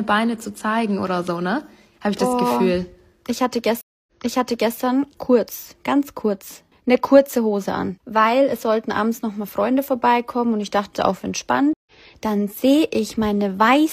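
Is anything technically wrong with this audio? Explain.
Yes. There are two stream reconnects, at 3.81 to 4.78 s and 11.73 to 11.92 s. Each time the connection broke, the player fell silent, then rejoined the stream with a fresh decoder. At 3.81 s the gap lasts 259 ms, and playback resumes about 0.70 s earlier, so a short stretch of sound repeats because the server resent a burst. At 11.73 s a 131 ms dropout is followed by a jump roughly 0.15 s ahead, so a sliver of audio is lost.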